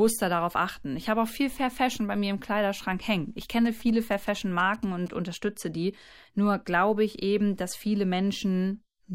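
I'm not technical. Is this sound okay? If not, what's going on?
No. From 3.42 to 5.08 seconds, just before "unterstütze die", there is a galloping ticking and buzzing. These are GSM signalling bursts. A nearby 2G mobile phone was signalling to its network, and the audio equipment picked up its radio pulses as a buzz repeating about 217 times a second.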